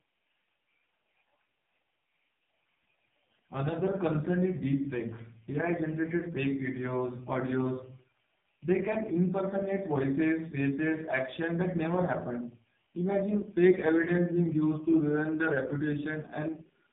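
From start to finish the speech carries heavy AMR narrowband mobile codec damage. Nothing above about 3.8 kHz survives, so sibilants lose their edge and the sound is boxed into a telephone band. The codec rebuilds the speech from a simple vocal-tract model fed by sparse pulses, and at this depth of damage that model shows through as a buzzy, synthetic texture, which fits the codec's lowest rate of roughly 4.75 kbps.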